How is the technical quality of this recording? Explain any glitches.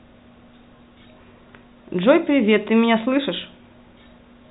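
No glitches can be heard in this speech recording, which carries the narrow, telephone-style sound of G.711 coding with its limited top end.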